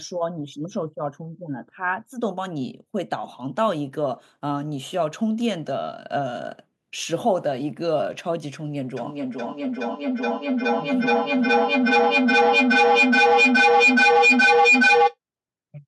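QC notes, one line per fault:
8.97–15.18 s feedback echo between two devices: speech returns roughly every 0.4 s, thinning and ringing, and builds to about 8 dB above the voice as the loop sustains itself.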